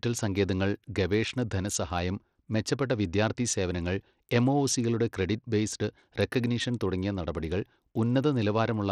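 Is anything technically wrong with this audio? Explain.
Yes. Throughout the speech, the top end is thin and unstable: the treble flickers in and out rather than sitting steadily, and a gritty, grainy noise with aliasing rides along with the voice. The damage is plainly audible. This is likely Bluetooth SBC compression at a low bit pool, consistent with a rate around 80 kbps. SBC splits the signal into a few broad sub-bands and hands out bits without a hearing model. The weak upper bands starve and the rest are coarsely quantised.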